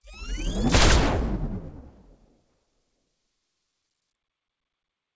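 Sounds over a call path, with nothing above 8 kHz, which fits a wideband codec such as G.722 at 64 kbps; no faults found.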